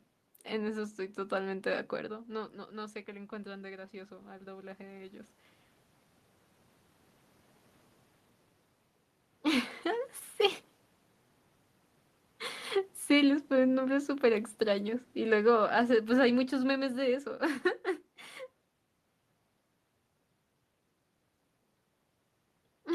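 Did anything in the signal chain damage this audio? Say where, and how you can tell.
Yes. The call-processing stage shows automatic gain rising from 2.74 to 5.4 s. The talker moved back around 2 s, dropping the input level by about 14 dB. The gain control then climbed about 5 dB over those seconds, so voice and room noise swell up together.

The same stage produces automatic gain falling from 13.1 to 17.69 s. The gain control lowered its gain by about 7 dB, gradually over roughly four and a half seconds. The sound starts louder and then sinks steadily, with its background noise falling along with it.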